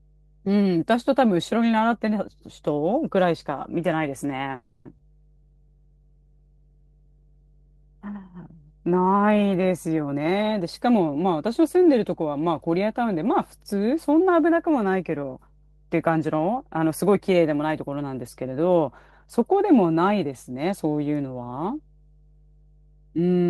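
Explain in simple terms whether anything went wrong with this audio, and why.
Several things went wrong, mostly in how the call delivered the sound.

A mains hum runs through the whole clip. It is a steady low tone at 50 Hz, fairly quiet beneath the speech. Electricity from the power supply has leaked into the audio, usually through a ground loop or a nearby transformer.

From 4.55 to 4.87 s there is a call audio freeze. The sound stalls for 0.3 s and is filled with a fading continuation of the last sound. Then the speech resumes where it stopped. Nothing is lost, but everything after it runs later. The likely cause is delayed network packets that emptied the receiver's buffer.

From 4.97 to 5.00 s the audio does a skip ahead. About 0.2 s of speech is simply gone. The two sides are joined almost directly, so the speech jumps forward. A stretch of audio was dropped while later audio was already waiting.

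From 5.37 to 8.64 s there is a jitter buffer slow-down. The speech plays at 94% speed with the same pitch, stretched by 0.19 s in total. Tiny pieces of sound were repeated to rebuild the buffer's reserve, so the speech sounds drawn out.

From 10.04 to 12.35 s comes a jitter buffer speed-up. The speech runs at 113% speed and still keeps its pitch. About 0.3 s was trimmed away in tiny pieces. The buffer had too much stored, and cutting it reduced the delay. The speech sounds hurried.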